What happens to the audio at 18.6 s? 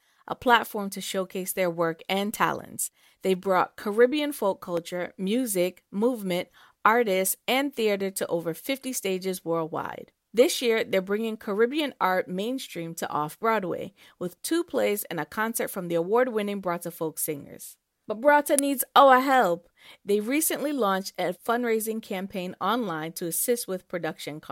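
At 18.59 s, just before "needs our help", a sharp snap cuts across the speech, an electrical switching spike lasting only a few milliseconds. It is likely a nearby switch, motor or static discharge arcing and coupling into the audio line. Unlike a digital dropout or buffer glitch, nothing is removed or repeated. The spike is added on top, and the speech carries on intact underneath it.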